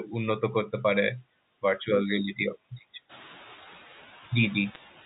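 A noise suppressor pulls down bands it judges to be steady noise by about 7 dB throughout, so the background dips between phrases and swells under them, more noticeably once the room noise rises around 3 s. From 4.75 to 4.80 s, bit errors on the digital phone line corrupt scattered samples of the G.711 signal at a low rate, producing a short burst of sharp ticks and crackle.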